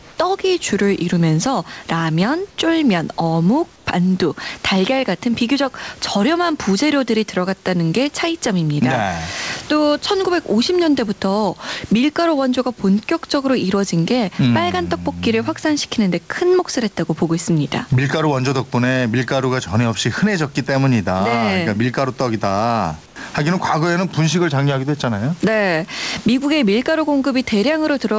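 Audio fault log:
Throughout, gain pumping: the gain is pulled down on each loud syllable, with a swing of around 15 dB, so loud and soft passages sit unnaturally close and the sound feels squashed. The likely cause is input gain set far too high, with a fast limiter or compressor clamping down on each peak. On a waveform the gaps look inflated and the peaks flattened. On a spectrogram the noise floor brightens between phrases and darkens under them.
0.00–0.18 s, 2.50–2.58 s, 3.76–3.86 s and 23.06–23.16 s, comfort noise in place of the background: for 180, 80, 100 and 100 ms the real room background gives way to a smooth, featureless hiss, about 2, 3, 7 and 6 dB quieter than what it replaces, in pauses sitting about 26 to 29 dB below the loud parts. This is likely discontinuous transmission, with the receiver filling silence with synthetic noise. On a spectrogram these are uniform, textureless patches. 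On a waveform they show as flat, slightly lowered bands.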